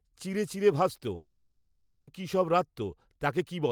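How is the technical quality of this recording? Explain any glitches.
The recording has one glitch, a gap in the middle of the speech.

Long network dropout, 1.15 to 2.09 s: audio likely stopped arriving, so the last sound fades out as a buzz or hiss and speech returns missing 0.92 s.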